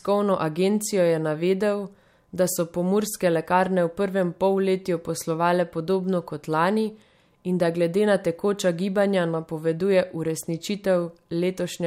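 No technical faults can be heard anywhere in the recording.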